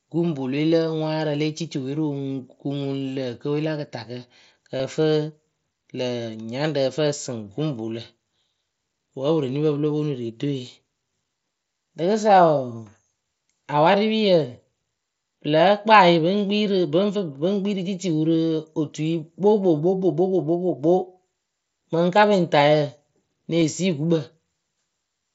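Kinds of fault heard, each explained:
Concealed Bluetooth headset packet loss: speech packets on the headset link went missing, and the receiver filled each gap by repeating the best-matching recent stretch of waveform. The 7.5 ms gaps near 2.30 s, after "le cici we rɨ", and at 18.34 s are nearly hidden. The 22.5 ms run at 4.77 s and the 15 ms one at 23.60 s, before "sii gukpǝ", hold a brief buzzy tone at full level, then warble. Unlike a plain dropout, nothing falls silent or clicks.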